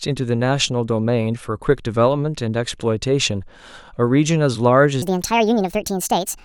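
From 5.02 s, a section at the wrong speed runs 1.58 times fast, likely a clock mismatch, raising pitch about seven semitones; spectrogram harmonics shift upward.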